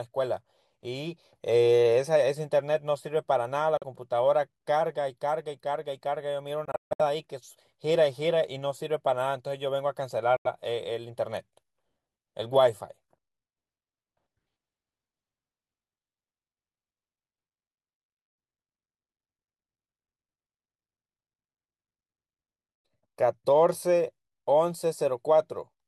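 Speech with three abrupt silent gaps: 3.77–3.84 s, 10.37–10.47 s, and a broken stretch from 6.65 to 7.01 s whose longest hole is 149 ms. Speech resumes further along rather than where it stopped, a likely Bluetooth dropout from packets lost before reaching the headphones.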